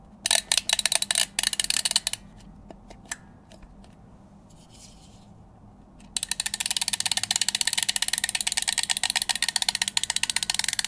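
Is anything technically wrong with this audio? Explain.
No, nothing in this audio points to a technical fault; the signal holds steady throughout, with no breaks, distortion or other damage to be heard.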